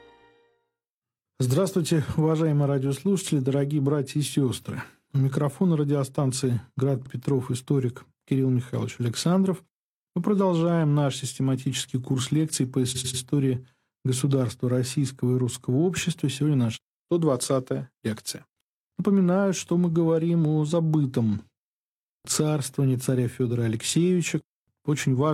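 At 7.02 s a stretch of about 46 ms is played twice, which fits a single compressed frame being written again. This is a brief stutter from repeated frames. From 12.91 to 13.19 s the fault is stronger: a 92.9 ms block, consistent with two frames, plays three extra times and adds 278.6 ms. The decoder simply replays duplicated data, so the sound loops audibly before moving on, and the clip runs longer by the repeated time.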